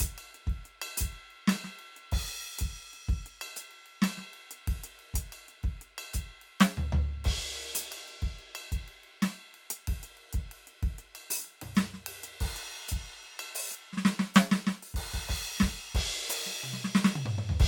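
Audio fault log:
No fault is heard in this music.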